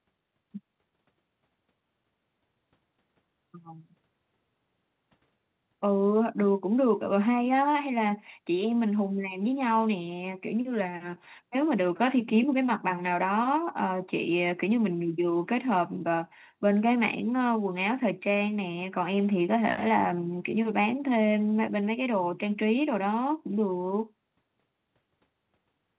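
Nothing stood out on listening to this speech recording, which has the narrow telephone-call bandwidth of a G.711 mu-law call path with nothing above 4 kHz.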